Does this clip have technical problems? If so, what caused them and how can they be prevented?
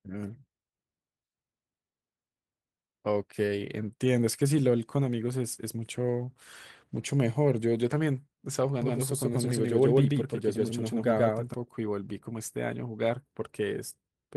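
Yes. From 8.82 to 11.54 s the speech suddenly doubles: a second, equally loud copy trails the first by roughly 150 ms, giving a hard slapback echo with no reverberant tail, and it cuts in and out abruptly. This doubled audio track is likely caused by the same signal reaching the mix twice, once directly and once through a slower path, or by an edit leaving two offset copies. Prevent it by routing each source to the mix only once and checking overlapping edits.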